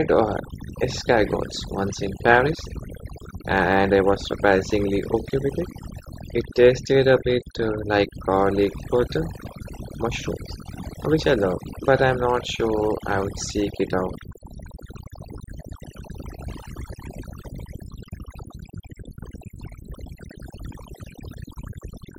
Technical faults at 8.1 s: overdone noise removal

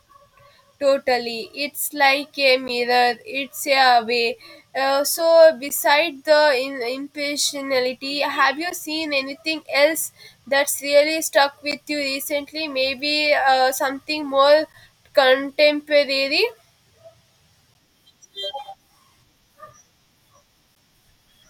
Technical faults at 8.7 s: gap between chunks

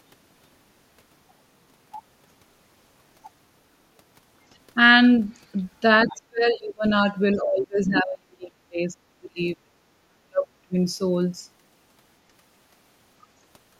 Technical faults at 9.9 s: speech suppressed in double talk

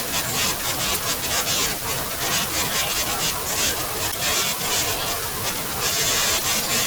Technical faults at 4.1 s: damaged data in a compressed stream

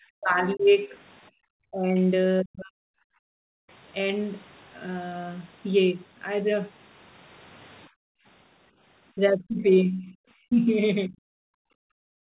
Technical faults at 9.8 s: speech suppressed in double talk

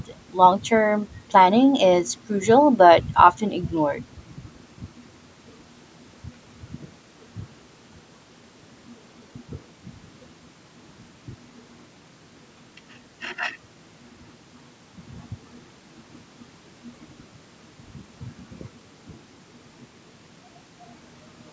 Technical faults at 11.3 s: none

